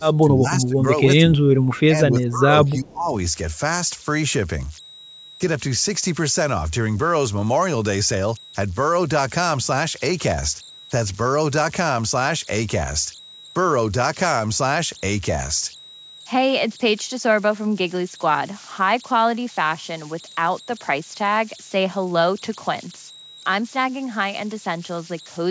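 A speech recording runs throughout with converter idle tones: a steady whistle around 4 kHz, about 19 dB below the speech, with grainy noise under quieter passages. It comes from a delta-sigma converter running without dither and settling into repeating bit patterns on low-level input. Unlike mains hum or a fixed interference tone, its pitch and texture shift with the signal rather than staying locked, and it sits inside a band that stops at 8 kHz, the normal limit of the call's microphone processing. Three stretches of speech suppressed in double talk follow: 0 to 0.82 s, dipping roughly 20 dB; 1.26 to 2.48 s, roughly 15 dB; and 2.78 to 3.12 s, roughly 20 dB again. The level sinks and the voice turns choppy in pieces, likely because an echo canceller could not separate this talker from loudspeaker echo while both sides spoke and pulled everything down. What separates this from packet loss is that the speech is ducked and thinned rather than replaced by synthetic fill. 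Inside the second stretch, from 1.65 to 1.8 s, a brief echo leak appears: a very faint copy of the voice, far below the direct speech, arriving 320 ms late. It is most likely residual loudspeaker pickup that the far end's canceller let through. Its fixed long delay marks it as returned echo, not room reverberation, which would trail off smoothly right after the sound.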